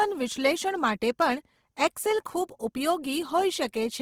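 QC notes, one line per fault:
throughout: Opus compression. Speech sounds rough and grainy. This is likely Opus music-mode coding near 16 kbps, which fills bit-starved bands with noise.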